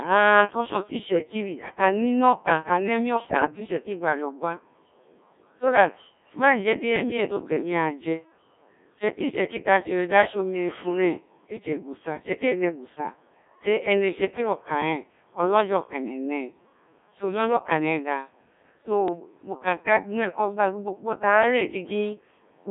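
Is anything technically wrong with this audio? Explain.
Yes, two problems. Throughout, the speech sounds robotic and buzzy within a 200 Hz to 3.6 kHz band. This is Codec 2 vocoder damage, with the voice rebuilt from sine waves at a rate that fits 1.3 kbit/s.

At 3.28–3.60 s, 6.96–7.17 s and 19.08–19.20 s, brief bleeps and warbles jump in pitch and level. These are bit errors on digital voice radio, with a few percent of flipped bits corrupting whole vocoder frames.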